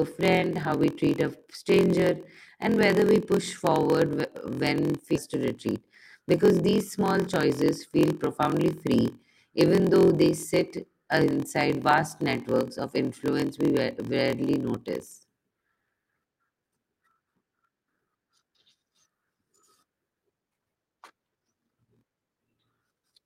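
A block size mismatch (padded) runs through the whole speech clip: one stage hands over shorter blocks than the next one reads, and the reader fills the rest of each block with silence. The buzz at 43.1 Hz fits a 1024-sample read block. Because every block carries a small gap, the speech plays at 0.938 times its proper speed, roughly 6% slow, while the pitch stays about normal. At 5.16 s there is a skip ahead. With later audio already queued, the receiver dropped about 0.7 s of speech and spliced the two sides together with no filler, so playback jumps forward abruptly and its delay shrinks by about the same amount. Right after that, from 5.35 s to 8.63 s, a jitter buffer speed-up follows. The buffer was still holding more audio than its target, so the receiver repeatedly cut out short slices of one or a few pitch periods, removing about a third of a second in total. Over that stretch the talking runs at 108% of its speed with the pitch unchanged and sounds hurried, settling just before "free even though they".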